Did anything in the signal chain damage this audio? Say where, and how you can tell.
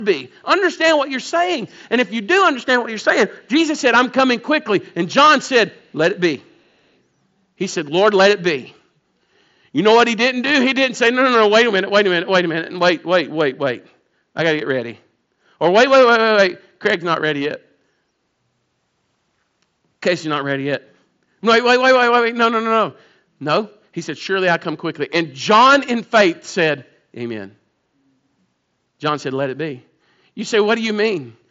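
Yes, at the call-processing stage. From 1.67 to 1.75 s there is an echo leak: a brief, very faint delayed copy of the speech, roughly 35 dB below the direct signal, arriving about 446 ms after the original. The timing points to a far end playing the call over a loudspeaker, where the echo canceller likely failed to fully subtract what its microphone picked up, so a scrap of that residue was sent back down the line.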